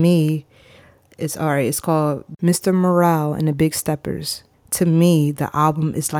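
Listening to this speech recording, nothing stood out as a technical problem at any point.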